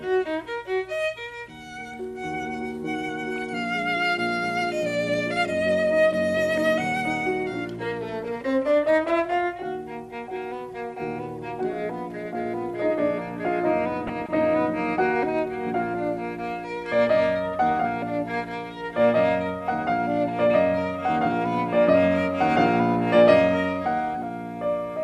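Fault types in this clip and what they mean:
MP2 compression: The whole music clip sounds dull and plainly gurgling, with a granular roughness, as though the top of the spectrum keeps thinning out and returning. That points to MPEG Layer II coding at a low rate, which fits about 80 kbps, likely squeezing the upper sub-bands off and quantising the rest coarsely. Unlike burbling, this damage never comes and goes; it runs through every second.
DAB burbling: Brief bursts of burbling jump out of the music at 3.36 to 3.42 s, at 6.57 s, and for a longer stretch from 13.92 to 14.29 s. Corrupted data is slipping past error correction, so individual sub-bands get short blips of noise. The longest burst suggests about fifteen frames were hit. The errors are sparse, a small fraction of a percent. They are short, isolated and erratic, unlike the constant dullness of compression.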